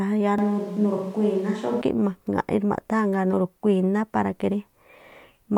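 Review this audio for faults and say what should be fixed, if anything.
From 0.38 to 1.82 s the speech suddenly turns roomy and hollow, with the low end thinned out, then snaps back just as abruptly. Loudness barely moves, but room noise comes up to roughly 30 dB below the speech. That's the signature of a switch to a distant microphone, most likely the close mic's signal dropping out for that stretch so the recording falls back to a farther pickup like a camera mic. Worth patching from a clean close-mic take if one exists. To prevent it, check the close mic's connection and levels before recording and monitor that channel throughout so a dropout gets caught on the spot.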